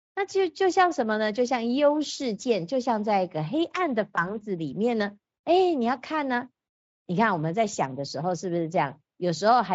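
At 4.15 s the speech briefly smears into a weak, stretched sound that takes until about 4.39 s to recover. This is VoIP packet loss concealed by the speech codec: a gap that fits a single 20 ms frame was filled by extrapolating the previous pitch and filter, and the decoder needed several frames to rebuild its state.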